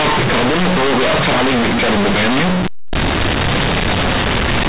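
Companded audio read as linear runs throughout this speech clip: A-law bytes from the 8 kHz G.711 telephone path are played as plain linear 8-bit samples without expansion, so every sign change swings across half the range, flattening quiet and loud alike into very loud, buzzy distortion with heavy noise in the pauses.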